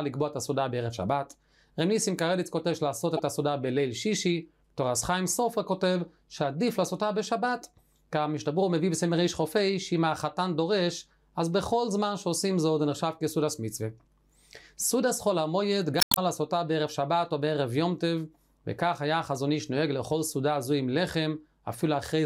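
Two brief glitches break into the audio, a short one from 3.17 to 3.20 s and a longer one from 15.98 to 16.18 s. This is damaged data in a compressed stream: corrupted bytes made the decoder misread frames and lose sync until it found a valid frame header again.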